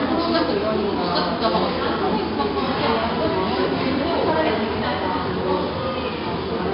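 From start to finish the audio carries heavy 4-bit ADPCM compression. Each sample is coded as a coarse 4-bit step from a predicted value, so a gritty, broadband hiss rides on every loud passage and sharp attacks smear where the step size lags. Nothing sounds above 5.3 kHz, which fits a low sample rate near 11 kHz and a stream of about 44 kbps. Unlike a steady noise floor, this grit swells and fades with the signal, and it lacks the warbling, swirly artefacts of perceptual codecs.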